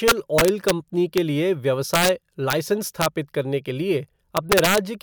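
Integer overflow cracks through this speech at 0.08–0.71, 1.18, 1.94–2.09, 2.50–2.53, 3.02–3.06 (just before "करने के") and 4.37–4.78 s. Peaks ran about 1 to 3 dB past the integer limit. Instead of clipping, they wrapped to the opposite sign. Each one snaps harshly.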